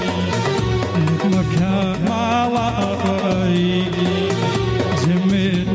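Gain pumping runs throughout, likely from input gain set far too high with a fast limiter clamping each loud sound, so the gain swings by around 10 dB.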